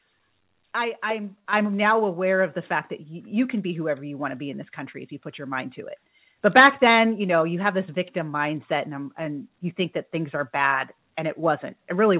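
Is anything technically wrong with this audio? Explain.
Yes. At 1.53 s the speech jumps up by about 8 dB in a single step: the microphone volume was stepped up when the call software judged the input too quiet and raised the device gain at once. The background noise jumps with the speech. A talker leaning closer would raise the speech alone, and a gradual gain control would ramp rather than step. The call path's limit of nothing above 4 kHz, which fits a G.711 narrowband codec, is present throughout the clip.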